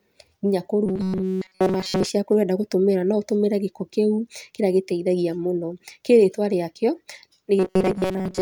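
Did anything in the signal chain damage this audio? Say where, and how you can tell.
Yes. The speech turns into robotic sound from repeated short buffers twice, from 0.86 to 2.10 s and again from 7.59 s to the end. In both stretches it's a stiff metallic buzz pinned at 188 Hz that only loosely tracks the speech. That points to a buffer stage that's likely being starved and looping its last chunk of about 5.3 ms, so most of the real audio in there is simply missing.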